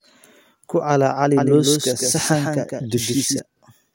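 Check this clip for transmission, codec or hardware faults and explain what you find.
One fault is present: a doubled audio track from 1.37 to 3.39 s. The same speech was most likely mixed in twice, with a second capture path or out-of-step edit adding a copy around 150 ms late and about 5 dB quieter. It sounds like a dry, full-band echo that switches on and off abruptly.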